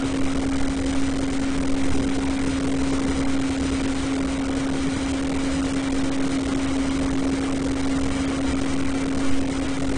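Everyday sound, with AAC compression damage that is plainly audible from start to finish. Nothing remains above about 9.8 kHz, and what lies below has a smeared, watery texture, with warbling on sustained tones and fizzing on hissy sounds. That is the likely cause: a low-bitrate AAC-LC encode, consistent with roughly 32 kbps. A plain low-pass filter would also cut the top cleanly but leave the remaining spectrum steady, without this shifting, patchy quality.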